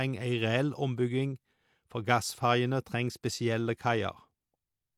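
Nothing stood out as a technical fault on listening to this speech recording.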